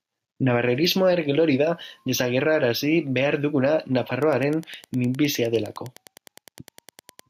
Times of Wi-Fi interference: 4.17-7.27

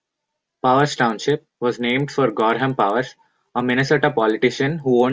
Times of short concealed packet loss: none

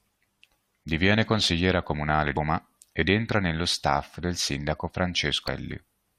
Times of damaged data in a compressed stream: 2.36, 5.47

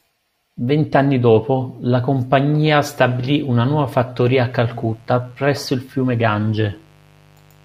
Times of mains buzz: 4.51-7.65

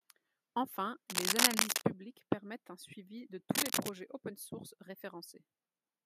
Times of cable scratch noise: 1.10-1.81, 3.54-3.92

